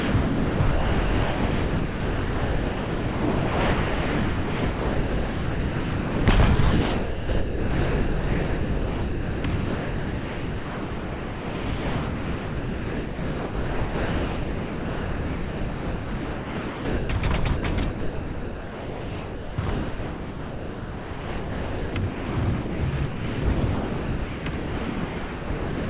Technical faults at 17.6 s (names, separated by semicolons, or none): sound dropped by the voice detector